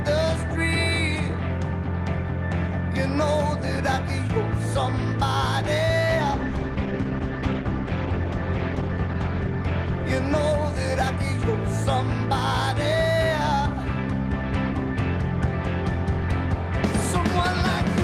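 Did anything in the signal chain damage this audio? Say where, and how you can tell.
Yes. A call bitrate drop at the codec stage, driven by the network, runs from 6.0 to 11.01 s. The sound turns coarse and dull for about 3.5 s at its worst, which fits the encoder falling from around 32 to 14 kbps and trimming high frequencies.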